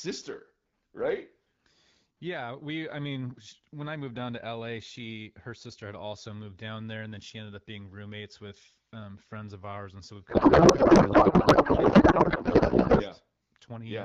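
From 10.29 s to 13.03 s, right after "ours and so we've", the speech turns into garbled noise and warble that barely tracks it. This is a codec payload misread: the AMR-WB decoder, otherwise coding cleanly at a rate that fits 12.65 kbit/s, is parsing frames with their fields shifted. The break points to octet-aligned packing being read as bandwidth-efficient. The garble lasts until both ends agree on the format again.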